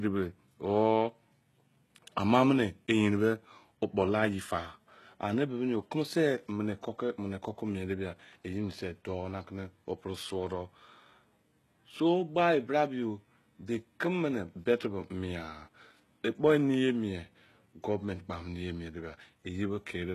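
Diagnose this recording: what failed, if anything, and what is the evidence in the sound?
Codec stage, throughout the speech: s sounds are gritty and lispy, the treble sounds synthetic, and nothing is present above 12.3 kHz. This is likely HE-AAC compression, with treble rebuilt from copied lower bands, consistent with a bitrate near 16 kbps.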